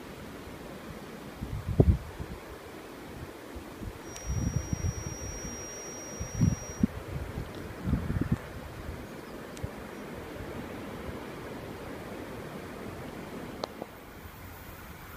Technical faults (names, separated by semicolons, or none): feedback whistle